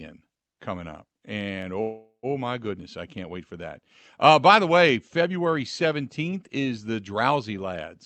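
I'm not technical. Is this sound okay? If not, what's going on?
No. From 1.81 to 2.26 s there is a call audio freeze. The sound stalls and trails off as a fading buzz or hiss, then briefly goes silent. Delayed network data is the likely cause. The speech resumes at "my goodness I can't", arriving late but with nothing lost.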